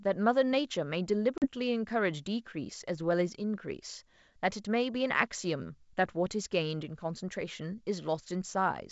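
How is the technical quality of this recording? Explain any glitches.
One glitch in the speech: a packet loss on the ADPCM call at 1.38 s. The G.722 wideband coding around it, at 64 kbit/s, stays clear with at most a faint upper-band hiss. At 1.38 s the audio drops into a hard-edged silent hole, and on its return it sounds briefly and slightly rough before settling by 1.47 s. About 40 ms of audio went missing, roughly a couple of packets. ADPCM decoding depends on an adaptive predictor and step size that track the sender. Losing packets knocks them out of step, so the resumed signal is distorted until they re-converge.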